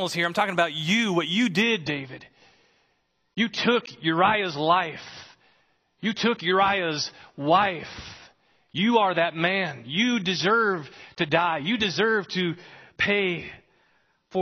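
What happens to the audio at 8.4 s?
At 8.4 s the speech is inside a stretch where the adaptive stream has dropped to a lower bitrate, running from 1.62 s, just after "about you what you", to the end. The slowed connection forced a switch to a much leaner encode, and the sound points to an AAC step down from about 96 to 24 kbit/s. Nothing is reproduced above 6.5 kHz, so the treble is gone and the speech sounds dull and more artefact-laden, with no gap at the switch.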